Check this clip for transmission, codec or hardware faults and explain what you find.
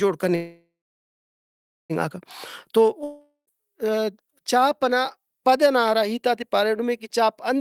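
Two transmission faults are present in this speech clip.

From 0.35 to 1.92 s there is a call audio freeze, likely from delayed packets draining the jitter buffer. The last sound is stretched into a fading buzz, then about 1.17 s of silence. Speech resumes where it stopped, now about 1.54 s late, with nothing lost.

From 3.04 to 3.49 s there is a long network dropout, likely a run of lost packets. The receiver fills the gap with a decaying buzz ending in about 0.11 s of silence. When speech returns, roughly 0.44 s of it is missing.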